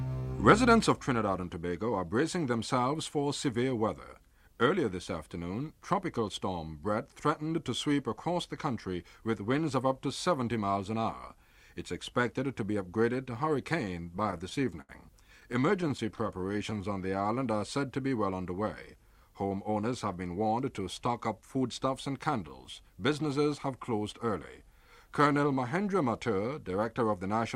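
From 13.85 to 14.91 s the audio stutters repeatedly. These are repeated stalls. Packets arrived late, and the jitter buffer kept running dry. About a dozen times the receiver extended the last sound, up to 73 ms at once. Nothing is lost, but the flow catches and drags.

A second stutter runs from 15.41 to 16.73 s. The stalls are more frequent but shorter, none over 16 ms. They add about 148 ms in total and fill roughly a tenth of that stretch. It sounds like a fine, rapid hitching.

Overlapping its end, from 16.47 to 17.58 s, comes a jitter buffer slow-down. The buffer was low, so the receiver repeated single pitch periods to build a reserve. It added 136 ms. The sound plays at 88 % speed, stretched and drawn out, with pitch unchanged.

From 19.69 to 22.39 s there is a jitter buffer speed-up. Too much audio had piled up, so the receiver cut short pitch-period pieces to reduce delay. Roughly a fifth of a second disappears. 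The sound runs at about 107 % speed, slightly hurried, at the same pitch.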